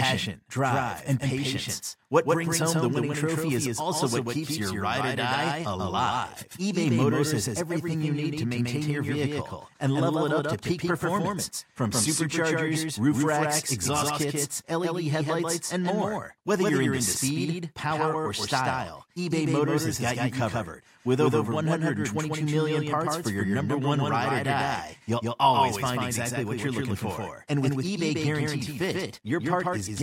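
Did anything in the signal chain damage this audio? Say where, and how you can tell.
Yes. A doubled audio track runs through the whole speech clip: a full-band copy trails about 150 ms behind, about 5 dB quieter, with no room colour. On a spectrogram every onset repeats as a fainter, identical ghost. The likely cause is a second, slower capture path.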